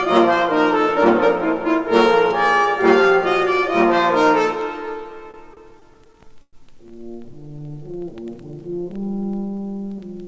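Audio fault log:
5.18–6.55 s, repeated stalls (stutter): packets arrived late, so the jitter buffer kept emptying; twelve brief stalls, longest 110 ms, were filled by stretching sound, nothing lost.
7.31–8.31 s, jitter buffer slow-down: rebuilding its reserve, the receiver repeated single pitch periods, adding 98 ms; audio plays at 91% speed, same pitch, drawn out.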